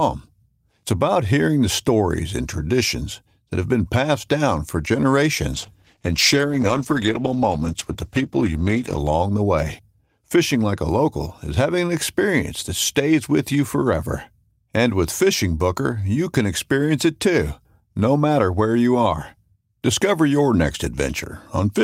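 At 5.53 s a call bitrate drop sets in and holds until 9.13 s, ending just before "the way". The sound becomes coarser and duller: high frequencies are cut away, and a rough, watery texture appears in the speech for about 3.5 s. This fits the call's bandwidth estimate collapsing, forcing the Opus encoder from roughly 48 kbps down to around 13 kbps, where it quantises more heavily and narrows the band until the rate recovers.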